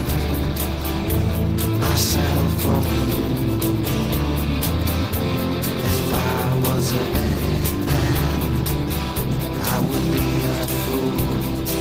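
No technical faults can be heard anywhere in this recording.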